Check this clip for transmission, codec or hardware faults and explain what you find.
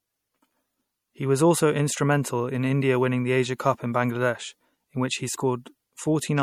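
There is one fault, MP3 compression, present throughout. The speech has a plainly audible watery, swirling quality, which is likely caused by MP3 compression at a low bitrate, around 64 kbps. The encoder starves weak frequency lines so they flicker between frames. Unlike a simple low-pass filter, which only dulls the sound, this is a shifting, metallic texture. The treble still extends to about 20.7 kHz.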